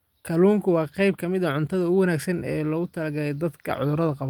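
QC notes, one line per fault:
No faults found in this speech recording. Nothing here needs a time or a fault line.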